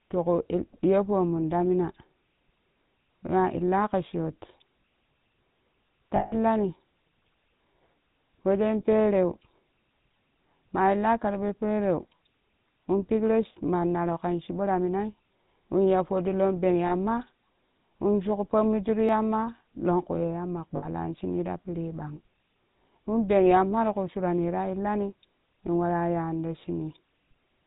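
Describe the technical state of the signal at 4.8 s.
At 4.8 s the speech sounds buzzy and gravelly, dull with nothing above 4 kHz. This is GSM full-rate codec damage, present throughout the clip. The codec models the vocal tract and drives it with sparse regular pulses, a coarseness that fits a 13 kbps stream.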